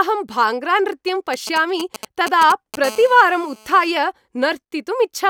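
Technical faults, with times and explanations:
1.34–2.76 s, GSM signalling bursts: A 2G handset close to the recording chain is exchanging short control transmissions with its network rather than carrying a call, and the audio circuitry rectifies each group of radio pulses into the signal path. The result is a galloping dit-dit-dit of brief buzzes at the 217 Hz burst rate, sitting roughly 10 dB under the speech, starting and stopping in irregular clusters.
2.84–3.91 s, GSM phone buzz: A handset in an active call now transmits continuously in its 217-per-second time slots. Every pulse is demodulated by the circuitry, producing a steady, hard, raspy buzz at 217 Hz rich in harmonics that bears no relation to the speech underneath. At about 20 dB below the speech it is quieter than the preceding bursts.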